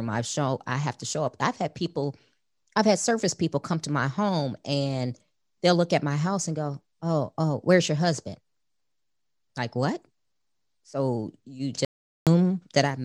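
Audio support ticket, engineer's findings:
Audio dropout to silence at 11.85–12.27 s, about 0.42 s. Speech cuts off into silence, no room tone. Likely input link lost or muted while recorder kept writing silence.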